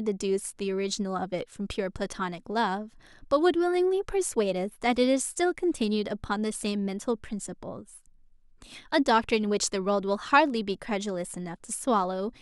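Nothing stood out on listening to this speech recording.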